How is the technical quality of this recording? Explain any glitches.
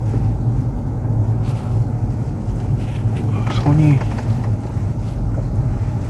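The quality is degraded throughout, with one fault present across the whole clip.

Generation loss runs from start to finish. The sound has likely been through a lossy codec around ten times, with a character that fits MP2 at about 96 kbit/s. Each re-encode quantises again on a shifted frame grid, so the errors pile up. Nothing remains above 11.8 kHz, and the audio sounds swirly, hollow and smeared, with softened attacks.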